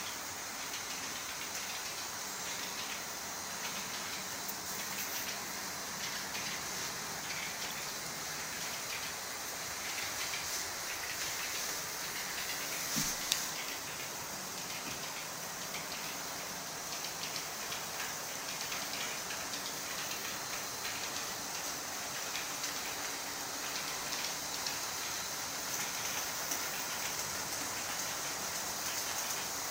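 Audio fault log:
No faults were heard in this clip. Nothing in the audio calls for a timed entry in this log.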